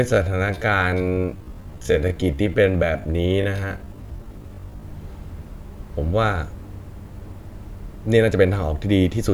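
From 0 to 4.84 s, the speech plays at about 0.62 times normal pace with its pitch unchanged. It drags. This is a time-stretched section, likely from software slowing it.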